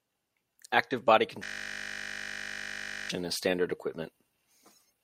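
From 1.44 to 3.10 s, just before "as standard", a system hang loop freezes the audio into a steady 50 Hz buzz. The hardware kept replaying one 20 ms ring buffer, about eighty times. Each repeat is identical, so it forms a pitched drone instead of the machine-gun stutter a longer loop gives.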